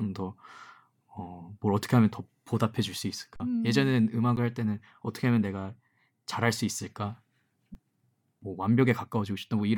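Speech freezes to a flat, held level at 3.36 to 3.40 s (40 ms), and again briefly at 4.36 s and 7.74 s. These are underruns with held sample: the output buffer emptied, the converter held its last value, and the audio missed during each gap was lost.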